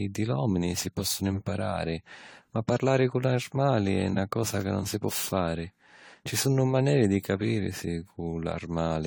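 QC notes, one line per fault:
Throughout, generation loss: swirly, hollow, smeared speech with blurred attacks, likely from about seven AAC passes near 64 kbit/s, each requantising on a shifted frame grid.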